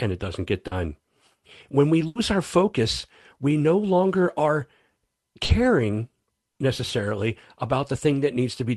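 At 0.67 to 0.73 s, and again at 5.45 to 5.51 s, the speech shows short concealed packet loss: about 40 ms never arrived, so the receiver extended the preceding sound and blended back in, leaving a brief smear or wobble. At 2.07 to 2.17 s and 6.49 to 6.57 s, a burst of packet loss removes 80 ms and then 60 ms. Here the filled sound is held and fades to a buzz or hiss before the speech picks up further on, so the stretch in between is missing rather than just blurred.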